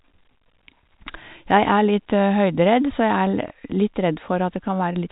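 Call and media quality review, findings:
Packet loss with last packet repeated at 3.48–3.50 s: small blip. One 20 ms frame lost, jitter buffer/PLC replaying the previous frame out of phase with pitch. Band-limited to 4 kHz by G.711 A-law telephone coding.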